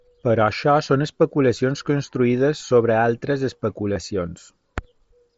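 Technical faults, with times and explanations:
2.58 s and 3.94 to 3.96 s, concealed Bluetooth headset packet loss: brief gaps of 15 ms and 22.5 ms in the link between headset and phone, which fit two and three lost 7.5 ms packets, were filled by repeating the best-matching recent stretch of waveform. Each fill sounds like a buzzy hold at full level with a slight warble as real audio resumes.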